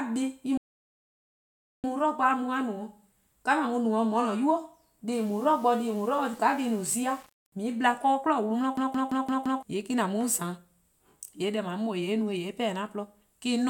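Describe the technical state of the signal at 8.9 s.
At 8.9 s the signal is inside a system hang loop that runs from 8.77 s to 9.63 s. The host or driver stalled while the audio hardware kept replaying the same ring buffer, so a single 170.67 ms slice of speech repeats exactly, five times, at about 5.86 Hz. That length fits an 8192-sample buffer. Because the segment is long, it sounds like a rapid machine-gun stutter, and about a second of the real audio is lost.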